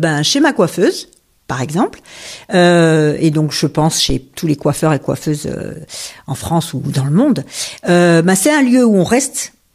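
At 4.10 s, after "et donc je pense", a phantom power thump: a supply switching step crosses the coupling capacitors, giving a deep thump peaking about -6 dBFS.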